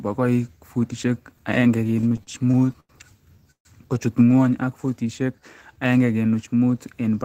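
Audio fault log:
1.87 to 2.92 s, repeated stalls (stutter): the speech keeps catching and restarting, twelve short holds with the longest about 90 ms, adding up to 238 ms of filler, roughly a quarter of that stretch. Packets were trickling in late, so the buffer kept draining and the receiver stretched the last sound each time. Nothing's lost, it just drags.
3.51 to 3.68 s, call audio freeze: the sound hangs as a fading continuation for 139 ms, the last 90 ms of it silent, then picks up right where it stopped. Likely packets held up in transit emptying the jitter buffer, so a 139 ms gap gets inserted rather than anything dropped.
4.36 to 5.88 s, jitter buffer slow-down: the speech plays at about 93% speed with the pitch unchanged, stretched by 112 ms overall, so sounds come out a touch drawn out. The receiver was repeating single pitch periods or bits of pauses to rebuild its reserve.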